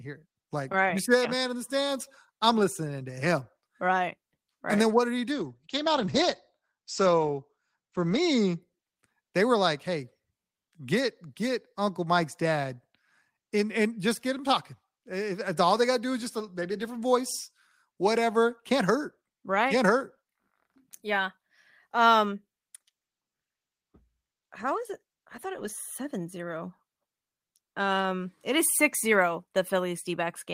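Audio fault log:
5.32–8.67 s and 22.76–25.79 s, call bitrate drop: the encoder was forced onto far fewer bits, so the sound turns coarse and rough. The first drop also cuts off the top end at 8 kHz, down from 20 kHz, and sounds muffled. Its roughness fits a fall from 32 to about 13 kbps. The second drop is milder and fits about 16 kbps. Each stays at its worst for roughly 3 s before the quality recovers.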